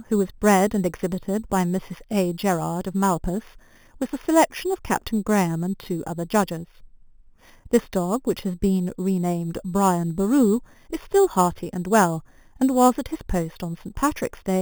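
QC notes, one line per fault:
Throughout: imaging from sample-and-hold upsampling. A bright metallic fizz follows the speech level, about 18 dB below it. Samples were repeated without smoothing, so mirror spectra appear. The lowest fills 4 to 8 kHz, which fits 8 kHz audio raised to 44.1 kHz.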